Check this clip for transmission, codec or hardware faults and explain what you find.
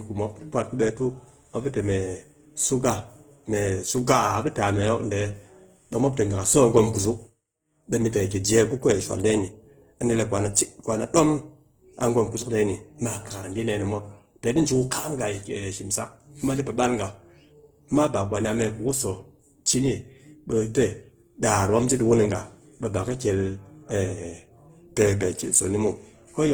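One codec fault runs through the whole clip. Throughout, the speech sounds plainly rough and grainy despite its full bandwidth up to about 20.1 kHz. This is likely Opus compression in its CELT mode, at a bitrate that fits roughly 16 kbps. The encoder preserves each band's energy but fills the missing fine detail with noise.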